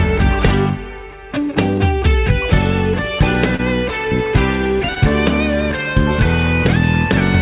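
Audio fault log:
3.56–3.61 s and 4.95–4.98 s: short concealed packet loss. Each gap is about 20 ms, which fits one lost 20 ms packet. The receiver covered the gaps with synthetic audio for 26 ms and 11 ms. It extended the preceding waveform, as pitch if voiced or shaped noise if not, then cross-faded into real audio. This makes a brief smear or wobble, within audio band-limited to 4 kHz, which points to G.711 mu-law at 64 kbps.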